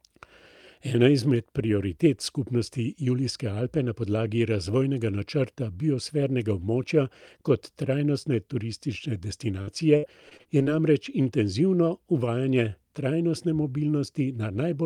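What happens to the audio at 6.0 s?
Nothing goes wrong at 6.0 s; the speech there plays through intact, with no dropout, click, distortion or other fault at that moment.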